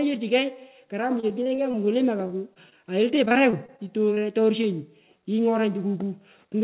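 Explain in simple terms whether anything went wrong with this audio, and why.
Yes, a few things went wrong, all typical of audio sent over a call connection where packets of sound arrive late or not at all.

The biggest problem is repeated packet loss, which gives a robotic sound. It happens twice, from 1.2 to 1.9 s and again from 3.15 to 4.2 s. Small chunks of speech kept going missing: six gaps in the first stretch and nine in the second, none longer than about a quarter of a tenth of a second. Each time, the receiver patched the hole by stretching out the last bit of sound it had. About 15% of each stretch is patched sound like this, so the speech comes across choppy.

At about 2.27 to 2.32 s there's a short stall from a late packet. One piece of audio arrived late, and the receiver's waiting area (the jitter buffer) ran dry. So it held the previous sound for roughly 22 ms until the piece showed up, then carried on from where it left off. 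Nothing is lost, but that moment is drawn out slightly and may sound faintly buzzy.

There are also two short concealed packet losses, at 2.54 to 2.58 s and 2.70 to 2.73 s. Each time, about 20 ms of speech simply never arrived. The receiver covered the hole with a guess based on the sound just before it, then blended back in. You'd hear a quick smear or wobble, and a short consonant might go missing.

Near the end, from 6.16 to 6.62 s, there's a jitter buffer speed-up. The receiver had built up more waiting audio than it wanted, so it trimmed tiny slices out to catch up, around 40 ms in total. That section plays about 6% fast without the pitch changing, so it sounds a little hurried.

Separately, nothing above 4 kHz comes through, which fits a narrowband, phone-style call codec.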